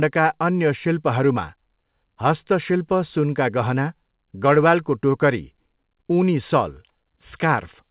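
No technical faults can be heard in the speech. It comes through a call path that works as it should, and nothing above 4 kHz is present, which fits a narrowband telephone codec such as G.711 A-law.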